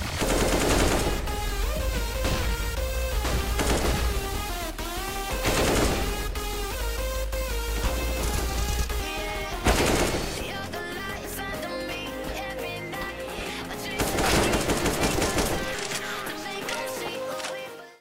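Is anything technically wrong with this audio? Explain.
Yes. At 2.24 s and 11.25 s, audio goes missing between chunks: about a third of a second vanishes and the sound jumps abruptly forward. This is likely a gap lost while switching 2.5 s chunks.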